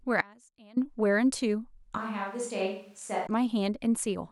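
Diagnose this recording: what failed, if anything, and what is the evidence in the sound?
Audio dropout to a faint residue, 0.21 to 0.77 s. The speech cuts out abruptly for about 550 ms and comes back just as suddenly. The gap holds only a faint trace of the signal, roughly 25 dB below its normal level. That rules out a pause or fade and points to the capture stage, most likely a momentary break in the analogue input connection while the converter and everything downstream stayed live and kept recording leakage.

Switch to a distant microphone, 1.98 to 3.27 s. The speech turns hollow and roomy at once, loses low end, and drops about 5 dB. Room noise becomes audible, sitting roughly 35 dB below the speech. The change in both directions is sudden, not a gradual movement of the talker. The problem sits at the capture or mixing stage: the close microphone's feed failed or dropped out, likely leaving a farther pickup such as a camera microphone carrying the speech for that stretch.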